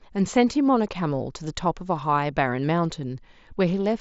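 No technical faults can be heard in this speech, which comes over a Bluetooth mSBC headset link carrying nothing above 7.7 kHz.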